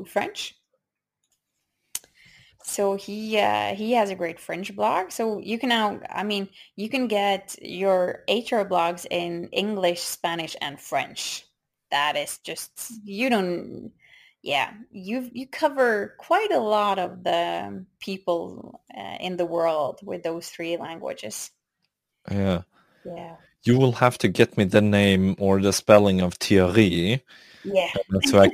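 Throughout the speech, crude rate conversion leaves a gritty, inharmonic fizz roughly 25 dB below the voice, rising with loud and bright syllables. The pattern fits nearest-sample dropping from 48 kHz to 44.1 kHz. A spectrogram shows faint mirrored lines unrelated to the speech harmonics.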